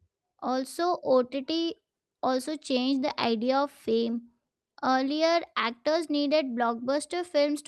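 No faults are audible anywhere in the recording.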